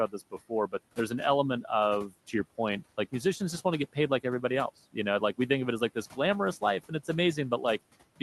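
Between 2.08 and 2.34 s the noise suppressor cut part of the speech, mistaking it for the room noise sitting about 20 dB below. Around a tenth of a second of soft sound is pulled down by up to about 12 dB, so it comes across as swallowed and faint.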